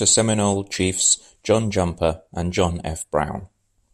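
Listening through the speech, nothing stood out as a technical problem at any point.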